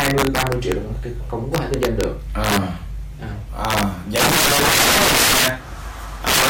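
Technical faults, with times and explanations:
Throughout, integer overflow: gain pushed peaks about 14 dB past the integer limit, so roughly 7% of samples wrap to the opposite sign, giving violent cracks on loud passages.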